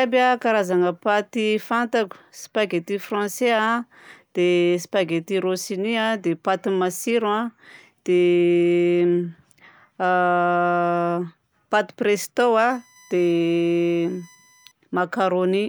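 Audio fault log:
12.72–14.72 s, USB whine: a thin, fixed-pitch whine sits under the speech for two seconds. It is built on 1 kHz, strongest at 6 kHz, and about 35 dB below the speech. The USB bus draws current in 1 ms frames, and that pulsing leaks into the audio through power or ground.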